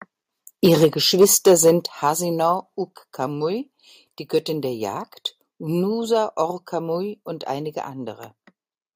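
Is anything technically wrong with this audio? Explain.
Yes. Microphone overload likely occurs from 0.64 to 0.85 s, about 3 dB over, and again from 1.21 to 1.7 s, about 5 dB over. The input gain pushes peaks past the converter's ceiling, flattening their tops, so the loudest speech there carries a harsh, crackling edge.

The microphone volume is stepped down at 0.85 s (about 2 dB), 1.86 s (about 7 dB), 2.88 s (about 2 dB) and 5.94 s (about 1 dB). Lowered device input gain likely makes voice and background drop together, most sharply at 1.86 s.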